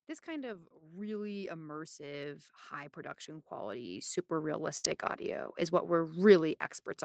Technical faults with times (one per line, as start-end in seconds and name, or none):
0.25-5.51 automatic gain rising
0.53-0.63 lost packet rebuilt from error correction
2.01-2.07 lost packet rebuilt from error correction
4.77-4.85 burst of packet loss
4.85-5.31 lost packet rebuilt from error correction